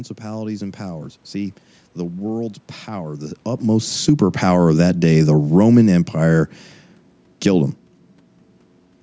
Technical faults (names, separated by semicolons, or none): automatic gain falling